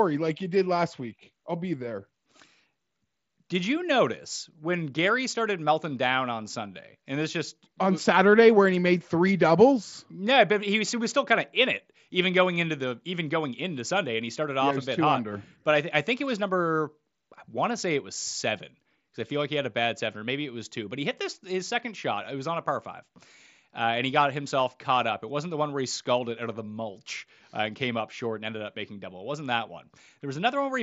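Nothing's amiss in this speech recording, which comes over a Bluetooth mSBC headset link and has no technical faults to point to.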